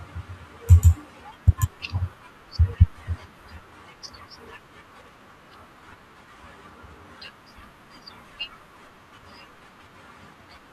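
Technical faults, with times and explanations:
1.39–1.53 s and 5.03–5.52 s, DAB burbling: short blips of noise over the speech, the second burst longer. Weak reception lets roughly 0.2% bit errors slip past error correction into the MP2 data, so wrong samples put short noise blips into individual sub-bands.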